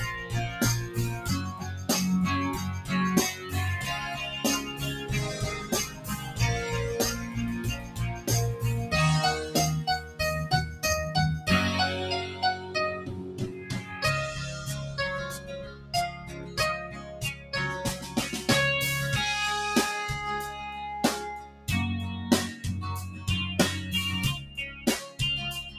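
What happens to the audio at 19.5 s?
At 19.5 s the noise suppressor applied to music or sounds is still at work, as it is for the whole clip. A processor built to clean up speech treats the steady, sustained parts of this sound, along with any ambience and decay, as background noise and pulls them down, while sharp onsets slip through. Level swings by around 10 dB, so held material sags and tails sink, leaving a pumping, fluttering, thinned-out texture.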